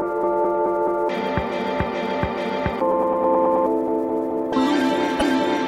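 Near the end of the clip, from 5.16 to 5.23 s, there is damaged data in the compressed stream. A stretch of the encoded bytes no longer matches what the decoder expects, so it misreads or discards those frames, loses its place and has to hunt for the next valid frame header before decoding resumes. For about 70 ms the sound breaks off its normal course and is replaced by the decoder's output during that resynchronisation.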